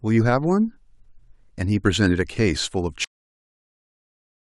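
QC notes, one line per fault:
3.04 s to end: cut-off end. The speech stops mid-sound and drops into digital silence with no decay. The final stretch of audio never reached the output.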